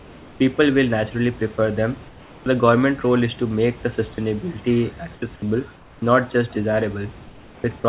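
This speech clip likely passed through a sender running discontinuous transmission, whose voice detector stopped sending audio in the pauses so that the receiver filled the gaps with generated noise. The result is comfort noise in place of the background at 0.0–0.4 s, 2.08–2.46 s (right after "prefer them"), 5.14–5.22 s, 5.76–6.02 s and 7.24–7.64 s. In each gap the natural room noise, which sits about 25 dB below the speech, gives way to a flat, detail-free hiss about 2 to 6 dB quieter, and the real background returns when the speech does. At 2.44–2.46 s the same detector was likely slow to register that sound had resumed, so the first 20 ms were never sent and comfort noise played in their place. This onset clipped by the voice detector makes the speech after the pause begin abruptly, without its soft attack. All of this is heard through a narrow call path with nothing above 4 kHz, which fits G.711 μ-law.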